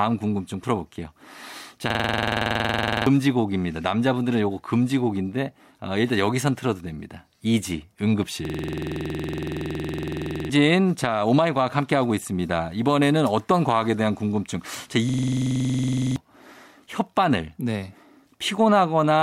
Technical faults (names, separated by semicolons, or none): system hang loop